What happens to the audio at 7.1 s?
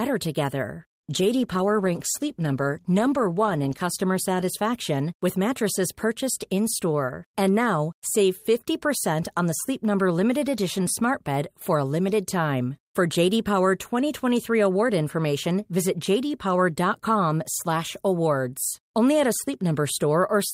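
Nothing goes wrong at 7.1 s; the speech carries on intact through that moment with no dropout, click or distortion.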